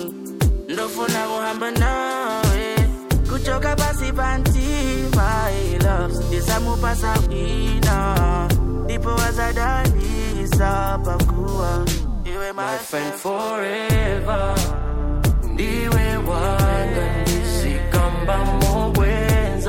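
From 0.00 to 13.78 s there is computer activity noise: changing processor or graphics load shifts the ground shared with the audio circuit, adding a buzzy, chirping pulse train near 200 Hz, roughly 25 dB below the sound. On a spectrogram it forms evenly spaced harmonic lines that flicker with load. The waveform shows a fine, spiky ripple.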